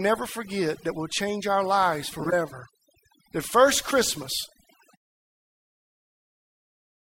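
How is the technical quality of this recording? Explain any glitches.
The recording has two kinds of problem: heavy-handed noise reduction across the whole clip, and two brief decoding glitches.

Throughout, the speech sits over a near-silent background with twinkling specks. This is overdone noise removal: the reducer pushes bands near its noise estimate so far down that quiet parts of the voice vanish too.

From 2.18 to 2.33 s, right after "will change our lives", a glitch peaking around -15 dBFS cuts in, and a shorter glitch follows at 3.90 to 3.94 s. Each is a corrupt frame decoded, where damaged compressed data was played anyway and put energy at the wrong frequencies. The first spans several frames, the second likely just one.

The fade-out around 5 s is smooth, with no click.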